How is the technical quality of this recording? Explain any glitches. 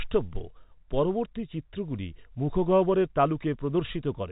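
No glitches turn up anywhere here; the speech just has the narrow telephone-band character of G.711 coding, with nothing above 3.8 kHz, which is simply how that format sounds.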